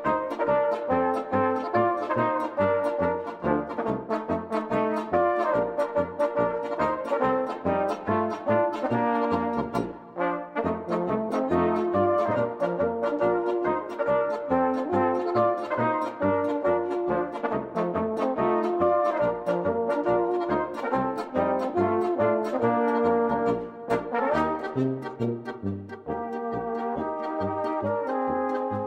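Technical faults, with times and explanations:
No technical faults, with times and explanations, to list here.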